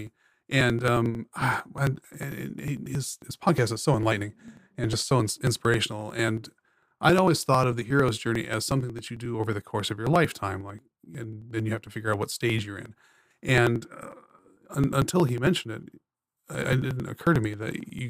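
Periodic USB or driver dropouts run from 0.07 s to 17.99 s. Every 0.09 s a blocked bus or driver skips around ten milliseconds of audio outright, leaving a fast, even train of ticks through the speech, roughly two hundred of them.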